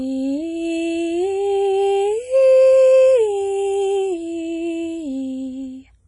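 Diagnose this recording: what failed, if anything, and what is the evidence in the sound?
WMA compression, throughout the music: a washy, ringing smear with a hiss that breathes with the signal, and nothing above 10.1 kHz. This is the codec stage, likely a low-bitrate WMA encode around 24 kbps, where long transform blocks spread quantisation noise and weak partials are zeroed.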